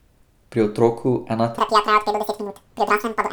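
From 1.58 s, after "otroku ena", audio read two samples at a time (double speed) makes the speech twice as fast and an octave higher.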